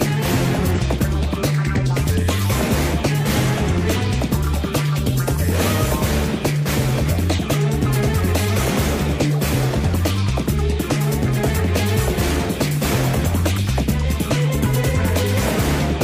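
Damaged data in the compressed stream causes short blips at 0.75–0.79 s, 2.88–2.94 s, 7.34–7.40 s and 16.03 s. The decoder misreads frames and loses sync.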